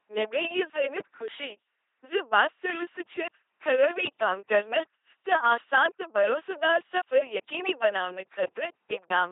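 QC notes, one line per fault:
Throughout: LPC-10 vocoder, heavy damage; each frame is buzzed or hissed through a ten-pole filter, giving robotic speech, nothing above 3.8 kHz, consistent with 2.4 kbit/s.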